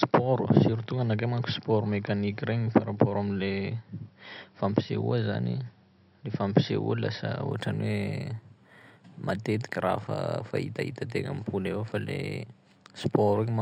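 From 7.51 s to the end, imaging from linear upsampling: straight-line interpolation, which fits raising a 12 kHz rate to 48 kHz, dulls the top and leaves mirrored copies at 6 to 12 kHz, roughly 30 dB down. The result is a faint metallic shimmer on sibilants. Unlike aliasing, the extra content sits above the original band rather than folding down into it.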